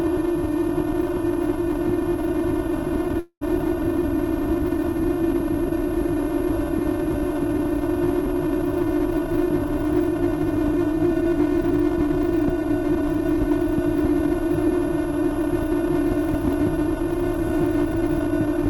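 From start to finish, the louder peaks carry a brittle crackle. This is hard clipping: the signal is driven about 5 dB past what one stage in the chain can pass, so the tops of the waveform are sliced flat. Less than one percent of the samples are over the limit, so the damage stays confined to the peaks. The flattened tops add high harmonics, which is where the crackle comes from.

At 3.19 s the sound turns into a smeared, buzzy continuation that fades away, followed by about 70 ms of silence. Normal audio returns at 3.43 s, but roughly 220 ms of the original material is simply missing. This is most likely a long network dropout. No packets arrived during that stretch, so the receiver stretched out the last sound it had for about 217 ms and then went quiet until the stream resumed.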